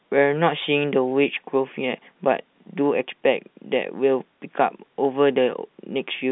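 Nothing here needs flagging: it's a speech recording carried over ordinary G.711 telephone coding, which just keeps it to the usual phone band of about 150 Hz to 3.7 kHz.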